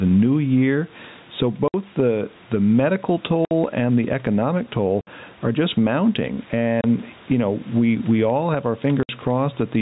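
Throughout, gain pumping: the gain ducks by around 10 dB under louder speech, likely from excessive input gain driving a fast limiter, unlike steady natural level changes.

Packet loss filled with silence cuts hard-edged holes at 1.68, 3.45 (between "the the medical" and "and the economic"), 5.01, 6.81 and 9.03 s. Each lasts 60 ms, except a 30 ms hole at 6.81 s, consistent with 30 ms packets. The dead-silent gaps, with no fade or repeated sound, set this apart from concealed loss.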